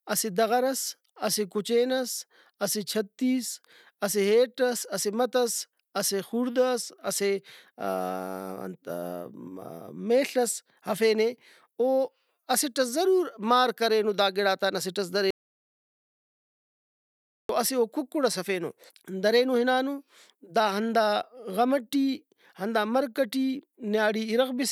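From 15.31 s to 17.49 s the speech cuts off abruptly into dead digital silence, with no room tone at all, for about 2.19 s, resuming mid-flow on "اسہ او کُکڑ ئس". This audio dropout to silence likely came from the input being lost while zeros kept being written, so that stretch is gone.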